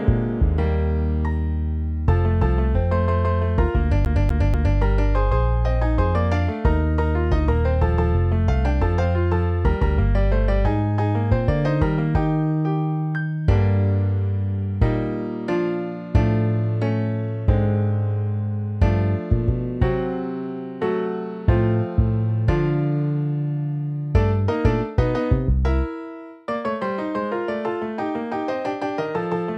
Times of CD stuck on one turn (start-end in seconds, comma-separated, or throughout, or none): 4.05-4.78